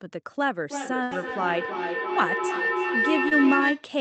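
Feedback howl runs from 0.68 s to 3.95 s. The sound travels from microphone to loudspeaker and back with more gain each trip, so the repeats narrow onto a tone near 2 kHz. The loop delay is roughly a third of a second, and the howl peaks at about 1 dB below the speech.

A burst of packet loss falls at 1.03 to 1.13 s. About 80 ms of audio never arrived in time. The receiver stretched the last sound across roughly 74 ms as it faded, giving a held buzz or hiss before the speech resumes further along.

Short concealed packet loss occurs at 3.29 to 3.33 s. About 20 ms went missing, and the decoder filled the gap with a 21 ms continuation of the preceding sound before blending back in. It is heard as a brief smear or wobble.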